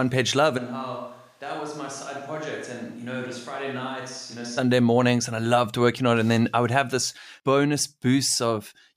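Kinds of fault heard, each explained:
Switch to a distant microphone: from 0.59 s the speech turns hollow, roomy and about 10 dB quieter, likely from a far microphone. Close sound returns at 4.57 s.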